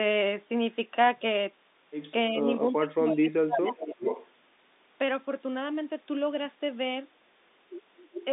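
Telephone-band speech, cut off near 3.8 kHz by the G.711 line, with two faults. From 2.7 to 4.05 s the talker drops by as much as about 25 dB for roughly a second in total, likely speech suppressed in double talk. Echo leaks sit at 3.65 to 3.86 s, 4.02 to 4.29 s and 8.13 to 8.23 s. These are delayed copies of the voice, 385 ms late and about 5 to 10 dB below it, likely from a speakerphone canceller letting some echo through. The fixed lag and the repeated voice set them apart from room reverb.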